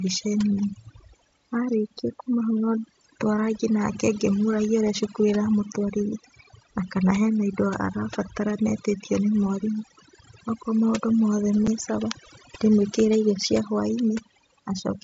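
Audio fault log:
Throughout: overdone noise removal. A noise reducer was set too strong on this speech. It pushes single frequency bands far down whenever they sit near its noise estimate. Quiet parts of the speech get cut along with the noise. The gaps between phrases drop to near silence, with small twinkling specks left behind.
11.67 s: unconcealed Bluetooth headset packet loss. The speech drops out for about 7.5 ms. That length fits a single lost frame on the headset link. Nothing filled the gap, so silence or an idle pattern replaced the missing audio. The hole starts and stops abruptly, and those hard edges can give a small click. The loss happens on an mSBC link, whose wideband speech reaches up to 8 kHz with light grain on loud sounds.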